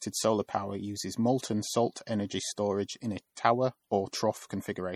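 A watery, swirling quality runs through the whole speech recording, with the sibilant s sounds turning metallic and chirpy and consonant attacks smeared rather than crisp. The damage is plainly audible. This is likely MP3 compression at a low rate, which fits a bitrate of around 48 kbps. Short of bits, the encoder drops the weaker frequency lines, and as these switch on and off from frame to frame they create the swirl and the chirping.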